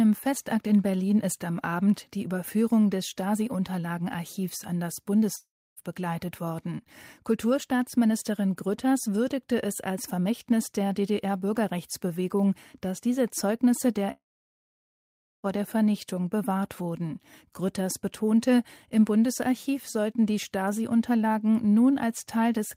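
A likely long network dropout twice stopped the speech stream, and the receiver stretched the last sound into a fading buzz before falling silent. From 5.35 to 5.79 s, between "an das" and "begleitet worden", the gap is short; from 14.12 to 15.46 s, over a second goes quiet. The speech returns with those parts missing.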